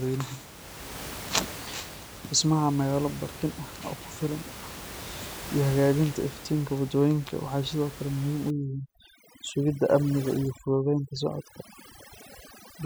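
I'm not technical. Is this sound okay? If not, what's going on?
No. From about 8.5 seconds to the end, overdone noise removal sets in: a cleanup tool cuts the room noise so hard that it takes quiet parts of the speech too. Unlike a simply muffled recording, this leaves twinkling specks in near-silence.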